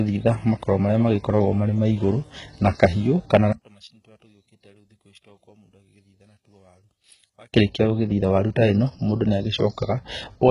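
Throughout the speech, heavy HE-AAC compression damage is audible, likely at a bitrate around 12 kbps: treble rebuilt from copied lower bands sounds gritty and metallic, and the spectrogram shows smeared upper harmonics that stop sharply at 11 kHz.

From 3.53 to 7.53 s, between "maigũrũ na kahiũ kana" and "gũgĩthitha waru ta ĩno", the level drops by about 32 dB, likely from one channel inverted cancelling the shared content in the mono sum. The waveform collapses to a thin residue, and the spectrogram nearly empties.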